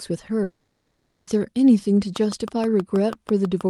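At 0.43 s the speech breaks off in a long network dropout lasting until 1.29 s, most likely caused by packets failing to arrive for that stretch. About 840 ms of the talk is simply gone. The receiver first smears the last sound into a fading buzz, and the final third of a second or so is plain silence before speech resumes mid-flow. The lost material never returns, which separates this from a brief glitch or a delayed, stretched passage.

From 2.16 s to the end of the clip, a train of clicks ticks through the speech at a steady 6.3 per second. Each pulse has the same sharp shape and peaks at about 5 dB above the speech itself, likely interference from nearby equipment or a faulty connection. The clicks keep their even pace through the pauses as well as under the speech, unlike random crackle or codec damage that only appears with the signal.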